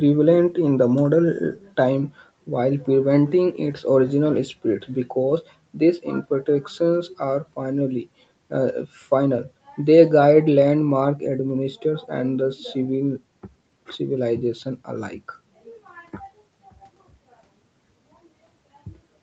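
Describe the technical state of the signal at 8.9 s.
At 8.9 s the speech is intact, with no fault, and only the ordinary band limit of the call path, nothing above 8 kHz, can be heard there.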